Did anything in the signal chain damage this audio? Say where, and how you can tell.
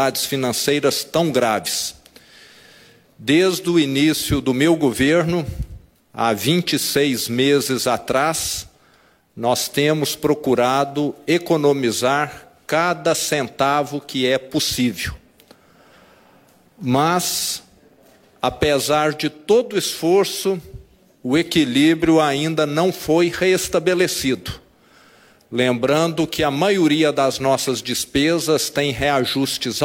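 No, nothing in the chain audibly damaged this audio.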